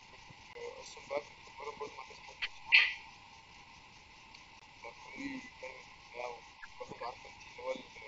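From 0.0 to 6.1 s a faint copy of the speech trails it by 303 ms at about 25 dB down, likely an echo leak from a far-end loudspeaker the echo canceller did not fully remove. Between 0.07 and 3.19 s the speech dips by up to about 20 dB, likely speech suppressed in double talk as the canceller turned down both talkers. A hard gap of about 20 ms at 0.53 to 0.55 s is likely a Bluetooth dropout, consistent with one lost packet, and the audio resumes as if it had kept playing. A brief dip of about 5 dB at 4.33 to 4.39 s is likely the same double-talk suppression. A second dropout of about 20 ms follows at 4.60 to 4.62 s, again likely Bluetooth. From 4.8 s to the end the speech is pushed down by up to about 25 dB, likely double-talk suppression. The 303 ms echo, likely leaking through the canceller, returns at 6.28 to 7.14 s and 7.31 to 7.94 s.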